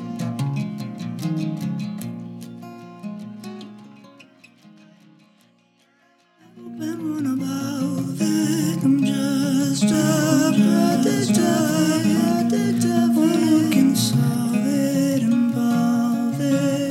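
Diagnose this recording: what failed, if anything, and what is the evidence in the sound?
From 9.94 s to 14.34 s a second, full-band copy of the sound runs about one and a half seconds behind the original, at roughly the same level, so everything is heard twice in overlap. The copy has no decay or room colour, unlike a real echo, and it cuts in and out abruptly at both ends. This is a doubled audio track, likely from the signal being captured a second time through a slower path or an edit leaving two offset copies.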